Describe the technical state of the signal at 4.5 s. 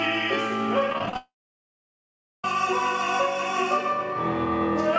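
At 4.5 s the signal is intact, with no dropout, glitch or distortion, and the only thing to hear is the call path's normal band limit, with nothing above about 8 kHz, which fits a wideband call codec.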